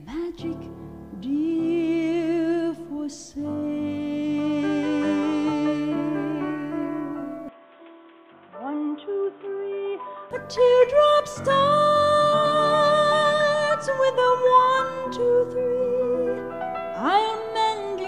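An input switched to a poorer device, from 7.49 to 10.31 s: the sound abruptly turns duller and boxier, with nothing above 3.8 kHz, drops a few decibels in level and gains a faint new noise floor, likely from the recording changing over to a narrower-band microphone.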